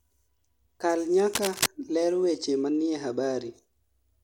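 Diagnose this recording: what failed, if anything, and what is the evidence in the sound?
From 1.33 to 1.67 s there's a burst of dense, ragged scratching laid over the speech, roughly as loud as the speech itself, and then it's gone. That's cable scratch noise, and the stage is almost certainly analogue wiring: a cable, connector or pot with a worn contact, most likely being moved. As it shifts, the contact resistance jumps around rapidly, and those fluctuations ride on the signal as uneven crackly noise for about a third of a second.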